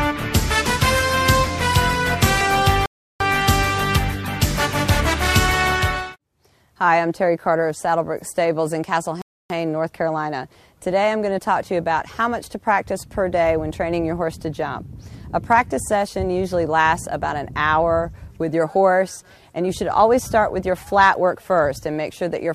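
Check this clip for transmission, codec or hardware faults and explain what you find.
Two rebuffering stalls interrupt the clip, at 2.86 to 3.20 s (about 0.34 s of silence) and at 9.22 to 9.50 s (about 0.28 s). Each time the player exhausted its downloaded audio and paused until more data arrived. The sound drops to silence, then picks up exactly where it halted. That seamless resumption separates a stall from a packet-loss dropout. A dropout skips material, whereas a stall loses nothing and only adds time.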